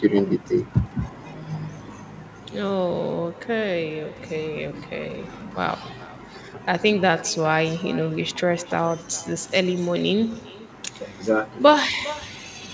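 Throughout the speech, every phrase is trailed by a faint, thin copy arriving around 0.4 s later, about 19 dB below the talker. This is echo with no canceller: the far end's loudspeaker feeds its microphone, sending the voice back through the call, whose 8 kHz band limit fits a wideband codec.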